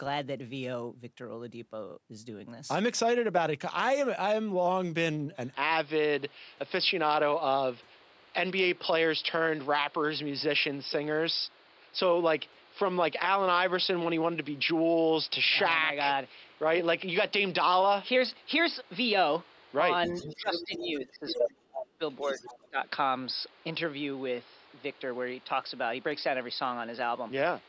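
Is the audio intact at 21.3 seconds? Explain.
No. Three faults overlap there. From 5.54 s onward, input switched to a poorer device is the likely cause of the band narrowing below the 8 kHz of the normal call path, with a new noise floor about 30 dB below the signal and no level jump or gap.

Between 20.36 and 22.02 s, speech suppressed in double talk likely occurs. The echo canceller pulls the talker down while the far side speaks, with dips reaching about 30 dB over roughly one and a half seconds in total.

From 21.28 to 21.48 s, the other side's voice is leaking through, likely from loudspeaker echo the canceller missed. It comes through at roughly the same level as the talker's speech.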